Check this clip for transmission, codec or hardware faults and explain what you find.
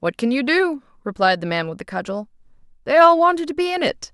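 Nothing in the speech recording points to a transmission, codec or hardware fault. No audible event calls for further explanation.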